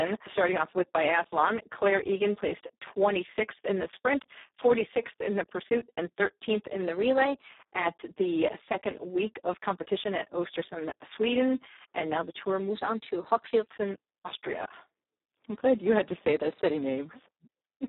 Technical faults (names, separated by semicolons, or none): Speex codec; drift correction step